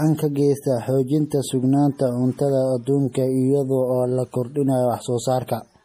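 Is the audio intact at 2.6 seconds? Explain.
No. At 2.6 seconds the speech carries the same damage heard across the whole clip. Nothing is present above about 15.2 kHz, and the sound has the smeared, swirly quality of heavy MP3 coding. This is likely low-bitrate audio saved at a high bitrate. A very lean MP3 encoding, around 40 kbit/s by the sound of it, discarded detail first. Re-saving it at a much higher rate cannot bring that detail back. The cut-off and the artefacts simply remain.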